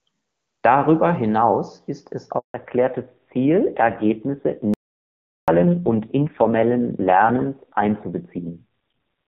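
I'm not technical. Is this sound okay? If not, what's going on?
No, it isn't. Right after "hinaus ist es", at 2.38 s, there's a handover gap: the phone switched the call to a different network, and for about 160 ms nothing got through, so the voice just stops until the new connection picks up at 2.54 s.

From 2.54 s to the end, there's a fallback to narrowband. Up to that point the call was clear HD Voice. After the switch it drops to older phone-quality sound, with everything above 4 kHz gone, so the voice sounds duller, muffled and a bit rough.

Then from 4.74 s to 5.48 s comes an audio dropout to silence: about three quarters of a second of complete dead air, with no background hiss at all, and whatever was said there is lost. The likely cause is the incoming audio briefly failing while the recording kept running.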